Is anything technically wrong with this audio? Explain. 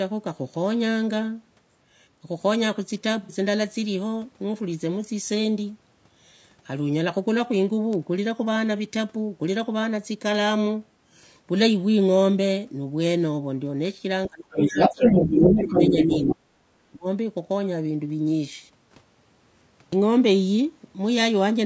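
Yes. Several faults are audible in this speech.

Low-delay AAC compression runs throughout. The voice sounds rough and grainy, with noise between harmonics. Its likely cause is AAC-ELD at a low bitrate, around 32 kbps.

AAC frame loss with concealment hits at 3.23 to 3.32 s. About 60 ms of audio is missing, which fits two lost frames. The decoder patches the gap, and that patch sounds smeared and noisy.

The speech is suppressed in double talk at 14.27 to 15.01 s, 15.65 to 15.91 s and 16.34 to 17.06 s. The voice dips hard, by up to about 40 dB at the end. Likely the echo canceller is muting both talkers at once.

The other side's voice leaks through from 14.5 to 16.33 s. It sounds roughly as loud as the talker, or a bit louder. This is likely residual loudspeaker echo. The microphone processing removes the lowest bass, and there is nothing above 8 kHz.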